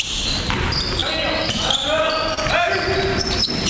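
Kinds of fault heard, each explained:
Short concealed packet loss: twice, about 20 ms of audio failed to reach the decoder in time, and the receiver bridged each hole by extending the preceding sound before blending back into the real signal, at 1.00 to 1.04 s and at 2.34 to 2.39 s. Each is heard as a brief smear or wobble. On a spectrogram the patch shows as a short stretch of repeated, smoothed texture.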